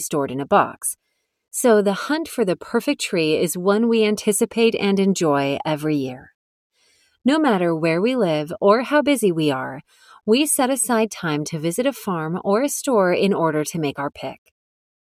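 Sound cut by the noise suppressor appears from 6.82 to 7.05 s and from 9.88 to 10.06 s. The suppressor treated part of the sound as noise and pulled it down, by about 10 dB and then about 14 dB, so the sound briefly sinks.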